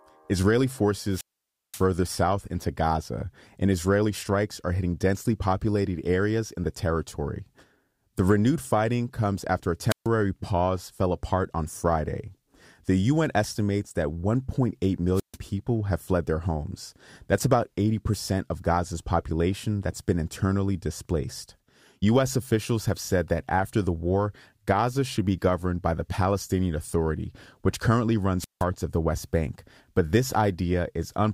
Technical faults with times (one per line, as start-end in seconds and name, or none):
1.10-1.85 wireless microphone squelch dropout
9.89-10.07 wireless microphone squelch dropout
15.14-15.37 wireless microphone squelch dropout
28.39-28.64 wireless microphone squelch dropout